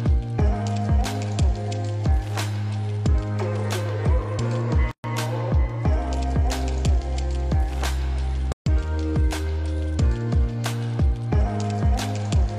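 At 4.91 s the sound drops out for about 128 ms, resuming at 5.04 s, and at 8.52 s a second dropout of about 141 ms runs to 8.66 s. Both are gaps at a join of encoded pieces: separately encoded segments were butted together untrimmed, so each piece's encoder start-up delay and final-frame padding survive as silence. The edges are smeared by the codec, and the sound picks up exactly where it left off.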